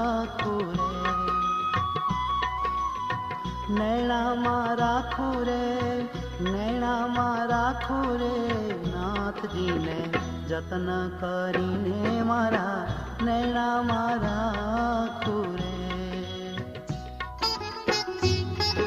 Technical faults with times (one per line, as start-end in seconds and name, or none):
8.20-14.20 adaptive stream at a lower bitrate